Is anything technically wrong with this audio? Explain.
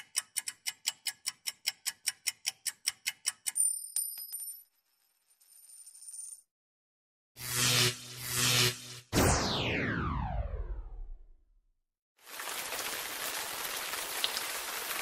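Yes. Two kinds of fault are present.

Throughout, the audio sounds dull, with upper frequencies flickering in and out and a gurgling, granular roughness. This is likely MP2 compression at a low bitrate, around 80 kbps. Whole upper sub-bands are switched off for lack of bits, and the remaining bands are coarsely quantised. It differs from MP3 artefacts by that band-wise flicker rather than smeared pre-echo.

From 2.46 to 2.92 s and again from 6.15 to 6.61 s there is processor overload crackle. Dozens of very short buffers, each roughly a millisecond or two long, miss their deadlines and drop to silence with hard edges. The result is a gritty tearing burst that stops abruptly, unlike a single click or a steady dropout.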